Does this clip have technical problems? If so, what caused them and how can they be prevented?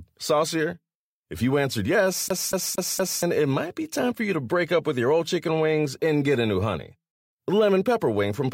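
Yes, right after "you answered yes" there's a CD stuck on one turn from 2.29 to 3.23 s. A scratch keeps knocking the laser back a track, so the same 235 ms slice plays four times with a tiny mute at each jump before "it might be time". Clean the disc, and rip it with an error-correcting ripper that re-reads bad sectors.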